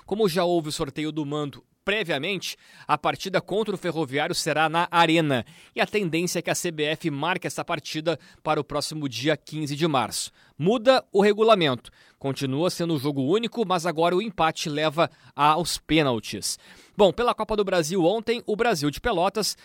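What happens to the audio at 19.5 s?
Nothing goes wrong at 19.5 s: the speech carries through that moment intact, with no dropout, click, distortion or other fault to be heard.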